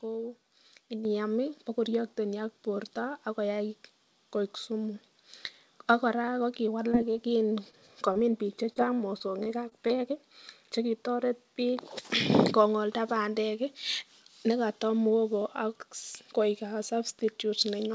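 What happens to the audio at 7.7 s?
At 7.71 s the speech briefly hangs: one sound is held about 19 ms too long, through 7.75 s, with a faint buzzy smear. This is a short stall from a late packet. The jitter buffer ran dry, so the receiver stretched the last sound until the packet arrived and then resumed where it left off. Nothing is lost, but playback now sits 19 ms later.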